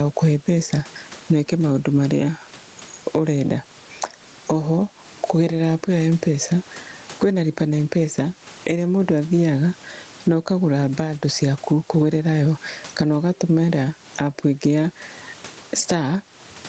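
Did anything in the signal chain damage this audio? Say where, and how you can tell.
Yes, likely at the input stage: microphone gain set far too high, with a fast limiter clamping each loud syllable. Throughout, the gain swings around 15 dB, squashing dynamics.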